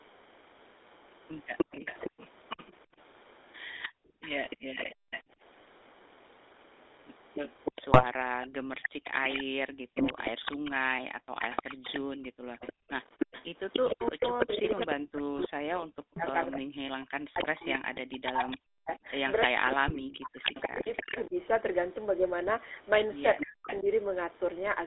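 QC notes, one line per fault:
Throughout: GSM full-rate codec. The sound has a plain buzzy, gravelly roughness, which fits the 13 kbps full-rate coder. That coder models the vocal tract and drives it with a sparse train of pulses, throwing away much of the fine detail. The line is limited to about 300 Hz to 3.7 kHz, so the top end is gone and the lowest bass is thin.
1.57 to 5.22 s, 7.34 to 21.22 s, 23.38 to 23.78 s: Echo leak. A delayed copy of the speech trails the original by 305 ms. In the first stretch it sits about 10 dB below the speech. In the long middle stretch and the short one near the end it is louder, about 5 dB down. The likely cause is a loudspeaker on one side feeding its microphone, with the echo canceller letting part of that pickup back into the call.
2.86 to 5.38 s, 8.55 to 12.89 s: Background gated by the echo canceller. The room sound drops away and comes back in short dips while the loudspeaker plays. 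The deepest drops reach about 40 dB. They add up to roughly a second in the first range and one and a half seconds in the second. The canceller is clamping the microphone hard whenever it hears far-end sound, so the ambience pumps instead of staying steady.
7.92 to 8.04 s, 19.88 to 20.03 s: GSM bit errors. Brief squawks and gargling pops break through the sound. The first burst is about 0.11 s long and fits a handful of corrupted frames. The second lasts about 0.15 s and points to a few more. Flipped bits reached the decoder, with error rates of 1.8 percent and 1.19 percent. Bad filter, pitch or gain values warp the spectrum or spike the level for those frames.
23.42 to 23.88 s: Speech suppressed in double talk. While the far side is talking, the near speech dips sharply and drops out in pieces. The cuts go down roughly 40 dB and total about a third of a second. This overlaps the short echo burst at 23.38 s. 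The likely cause is the echo canceller failing to separate its own talker from the loudspeaker echo and turning both down together.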